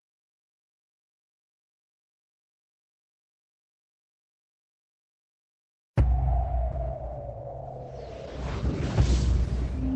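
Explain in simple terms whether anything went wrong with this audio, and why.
From 6.73 s to the end of the audio, a call bitrate drop makes the sound coarser, rougher and duller, with the top end trimmed away. It stays degraded rather than breaking into gaps or dropouts, which is what packet loss would sound like.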